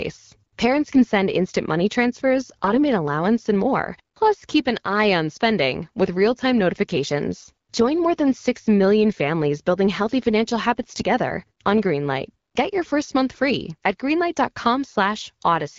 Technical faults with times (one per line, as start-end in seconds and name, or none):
0.95-1.02 AMR bit errors
2.64-2.80 AMR bit errors
10.97-11.03 AMR bit errors